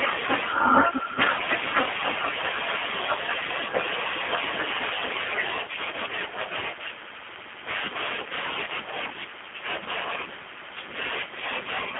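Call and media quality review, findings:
G.729 codec, throughout, 0 to 12 s. Speech band-limited to roughly 200 Hz to 3.4 kHz, with plainly audible roughness and a slightly synthetic, buzzy texture. Probable component: G.729A encoder on the call leg, consistent with 8 kbit/s. Mechanism: speech resynthesised from filter, pitch and sparse pulse parameters. Distinct from a plain telephone-band filter, which narrows the band without adding this coarse, rebuilt texture.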